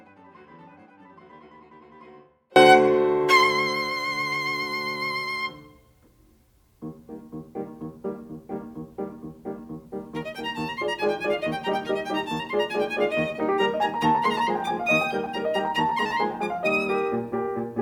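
The music opens mid-way through an audio dropout to a faint residue lasting until 2.56 s. Only a faint leak sits about 35 dB down, likely from a feed lost while the path stayed live. The waveform shows a thin sliver and the spectrogram a faint band, then an abrupt step to full level.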